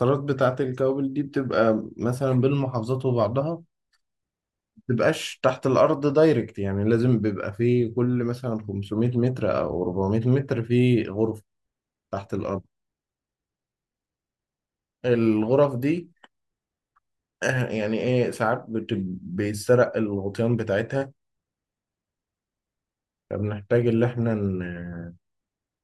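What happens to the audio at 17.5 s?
Nothing goes wrong at 17.5 s; the speech carries on intact through that moment with no dropout, click or distortion.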